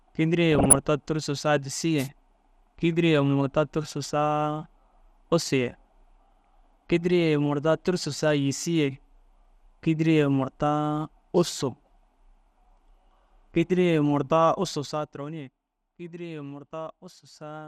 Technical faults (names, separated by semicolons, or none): MP2 compression; DAB burbling; wireless microphone noise hit